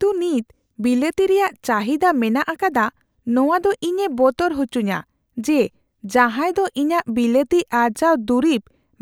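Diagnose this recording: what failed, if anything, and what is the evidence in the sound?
Nothing failed; no fault is audible in this speech.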